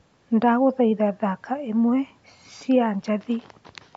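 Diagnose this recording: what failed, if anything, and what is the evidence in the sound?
Nothing failed; the speech carries no audible fault anywhere.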